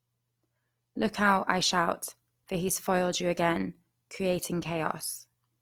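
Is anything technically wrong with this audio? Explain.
Yes. Throughout, likely Opus compression: the music-mode encoder fills starved bands with folded or noise content, so speech sounds grainy and rough, which fits about 24 kbps.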